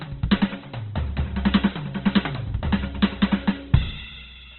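Opus compression runs through the whole music clip. The audio stops dead at about 4.2 kHz, leaving a narrow, boxed-in band, and the tones inside it sound rough, grainy and noisy rather than clean. This is likely the music mode of an Opus encoder starved of bits. It holds each band's energy but fills the detail with folded or noise-like content, and the heavy damage fits a rate around 12 kbps.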